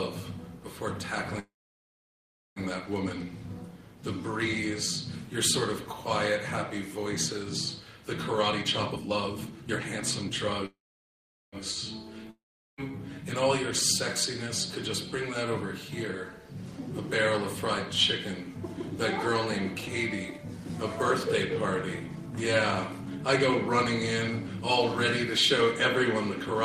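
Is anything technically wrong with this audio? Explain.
Yes, there are three kinds of fault here, all typical of a network call.

A call audio freeze occurs twice, from 1.39 to 2.59 s and from 10.66 to 11.56 s. Each time the last sound is stretched into a fading buzz or hiss that then drops to near silence, about 1.1 s and 0.8 s of it, likely because delayed packets let the jitter buffer run dry. Nothing is lost, and the audio resumes where it paused.

Jitter buffer speed-up happens from 8.48 to 10.62 s at 136% speed, trimming roughly 0.7 s, and again at 105% from 18.69 to 21.29 s and from 21.99 to 24.62 s, each trimming around 0.15 s. The receiver snips out short pitch-period chunks to cut excess delay. The pitch stays the same but the sound is rushed.

A long network dropout runs from 12.31 to 12.93 s, likely from packets that never arrived. The sound smears into a decaying fill and roughly 0.4 s of silence, then jumps ahead with about 0.48 s of audio gone.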